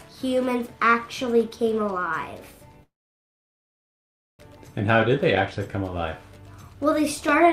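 A call audio freeze runs from 2.83 s to 4.42 s. The last sound is stretched into a brief fading tail, then about 1.49 s of silence. The audio resumes where it stopped, nothing lost, now about 1.56 s late. Delayed packets likely emptied the jitter buffer.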